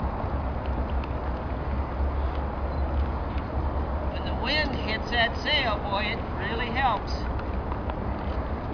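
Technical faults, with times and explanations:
The signal carries no audible technical faults at any point in the recording.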